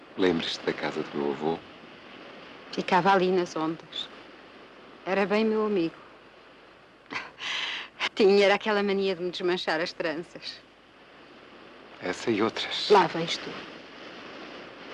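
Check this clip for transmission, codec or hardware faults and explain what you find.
One codec fault is present. From 8.06 to 8.08 s, compressed frames are skipped. Around 70 ms of audio never plays, which fits roughly three frames of about 26 ms. The sound jumps ahead.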